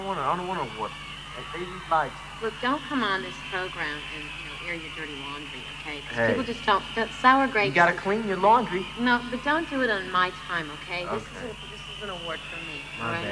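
Nothing technically wrong can be heard in this audio. No fault turns up anywhere in it, so there are no times or causes to give.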